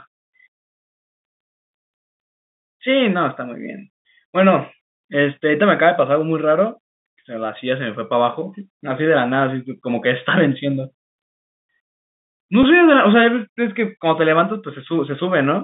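At 12.63 s there is packet loss with pitch repetition: about 10 ms of audio, which fits a single lost packet, was bridged by repeating the last pitch period. It sounds like a brief, slightly buzzy held tone, not the silent gap or click of a plain dropout, within the 150 Hz to 3.7 kHz telephone band of the G.711 line.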